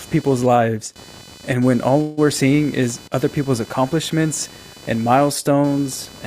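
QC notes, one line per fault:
throughout: computer activity noise. A buzzing chirp pulses at around 500 Hz, roughly 25 dB below the speech. It rises and falls with the computer's workload, not with the speech. Processor or mouse load is disturbing the shared audio ground.
2.01–2.26 s: call audio freeze. The last sound stretches into a fading buzz for about 158 ms, with no silence. Speech then resumes where it stopped, so nothing is lost. It now runs about 158 ms late, likely because delayed packets emptied the jitter buffer.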